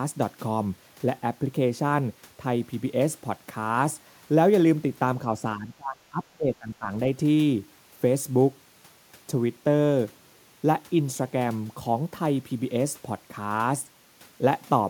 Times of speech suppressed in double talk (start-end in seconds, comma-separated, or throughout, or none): 5.56-6.90